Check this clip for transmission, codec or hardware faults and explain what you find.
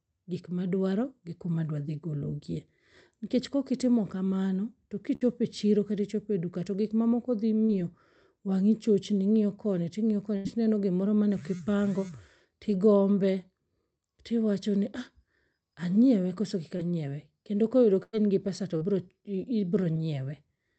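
Yes, there are transmission faults. The speech carries two kinds of packet loss, heard as held buzzes or fading hiss and brief smears.

Burst of packet loss occurs three times: at 5.15 to 5.23 s, at 10.37 to 10.47 s, and at 18.03 to 18.15 s. Each time, a run of audio failed to arrive in time. The receiver stretched the last sound to cover it, fading it as the gap went on. That fill lasts 55, 82 and 99 ms. The second follows "chochni ing'iyo koni ting'iyo" and resumes at "tino gimoro mane ok". The third resumes at "gi pesa".

Short concealed packet loss happens four times: at 7.65 to 7.71 s just after "to gik mamoko dhi", at 16.77 to 16.81 s, at 18.77 to 18.83 s, and at 19.93 to 19.96 s. Each hole is only 20 to 40 ms. The receiver patched it by extending the preceding sound, then blended back. Each one is heard as a quick smear or wobble in the speech.

The call path itself is not a fault. 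Its high end stops near 8 kHz, which fits Opus at around 32 kbps.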